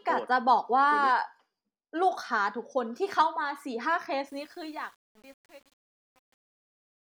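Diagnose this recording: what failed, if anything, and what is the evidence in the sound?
Gritty from 4.28 s, worst from 4.51 s to 7.14 s as the fade-out nears silence: truncation distortion on a fade, an undithered format conversion consistent with 8 bits.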